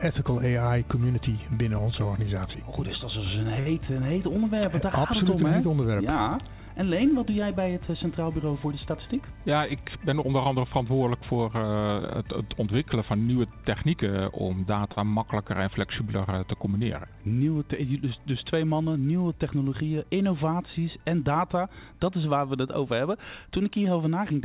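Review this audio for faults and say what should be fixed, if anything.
Short stalls from a late packet occur at 3.60 to 3.68 s and 14.92 to 15.10 s. The buffer ran dry, so the last sound was held for 59 ms and then 44 ms before resuming without a gap. This is unlike loss concealment, where audio is actually lost.

Jitter buffer speed-ups occur at 8.91 to 9.45 s (109%, roughly 50 ms removed) and 19.74 to 20.11 s (115%, roughly 70 ms). Repeated pitch-period cuts hurry the sound while pitch stays unchanged, unlike resampling.

Steadier network delivery or a slightly deeper, more slowly adapting jitter buffer would prevent both.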